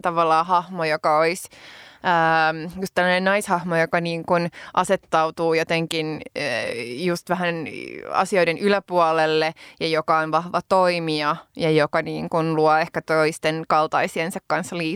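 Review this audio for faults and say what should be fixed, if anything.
No faults found in the speech; nothing needs fixing.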